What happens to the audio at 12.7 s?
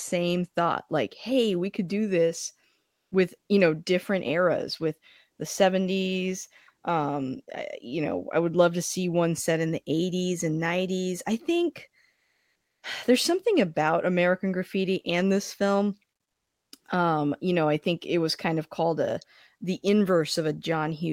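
Comfort noise replaces the background from 12.15 to 12.83 s, in the pause after "I think" and before "there's something about". The sender likely stopped transmitting during silence (discontinuous transmission), so the receiver filled those 0.68 s with steady, featureless synthetic hiss, about 2 dB off the real background level.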